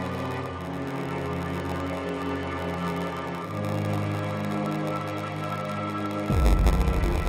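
A steady buzz at about 93.8 Hz runs through the whole clip, and everything plays slow at 0.938 times normal speed while keeping roughly its usual pitch. That's a padded block size mismatch: short written blocks are zero-filled to fit what looks like a 512-sample read, leaving a tiny gap every block.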